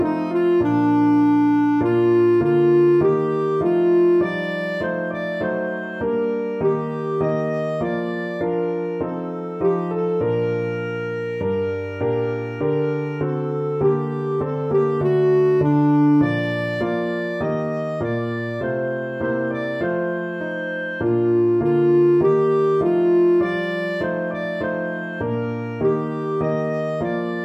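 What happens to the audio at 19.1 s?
Nothing goes wrong at 19.1 s; the audio there plays through intact, with no dropout, click or distortion.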